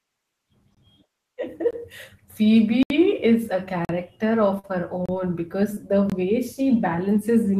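Hard-edged short holes at 0.75–0.77, 1.71–1.73, 2.83–2.90 s (just before "is a") and 3.85–3.89 s (just after "is a") are blocks of digital silence. The audio drops straight to silence for 21 to 72 ms, and the 21 ms gaps fit a 1024-sample buffer that was not filled in time. A brief smear at 4.59–4.66 s is short concealed packet loss: about 40 ms never arrived, and the receiver patched it by extending the preceding sound. Another silence block cuts 5.06–5.09 s, a 20 ms concealed loss smears 5.75–5.78 s, and a final 21 ms silence block cuts out at 6.10–6.12 s.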